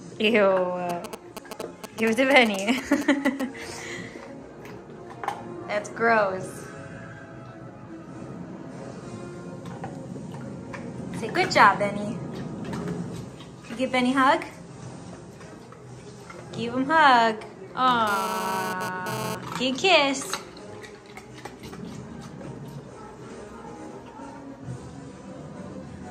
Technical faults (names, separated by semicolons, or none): GSM signalling bursts; GSM phone buzz